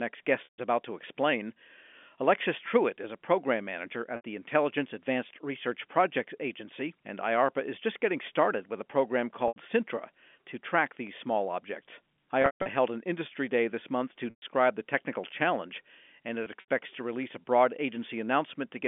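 Speech over a telephone-band line suffers from packet loss with pitch repetition. The gaps come at 0.44 s before "about to explain", at 4.16 s after "is a program manager", and at 9.48 s, 12.42 s, 14.30 s and 16.44 s. They last 80 to 200 ms. The receiver fills each gap by repeating the last pitch period, which sounds like a held buzz fading to silence. The worst spot is at 12.42 s, with a 140 ms run. The dropout lengths fit 20 ms packets.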